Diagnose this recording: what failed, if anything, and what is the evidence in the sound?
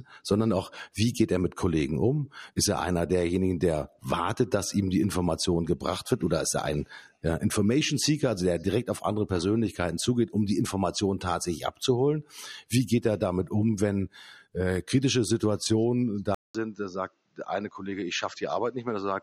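At 16.35 s the speech drops out for 200 ms. It returns duller and a little quieter until the end. Nothing remains above 7.6 kHz, and a faint new noise floor appears. The driver stage likely switched the input to a poorer device.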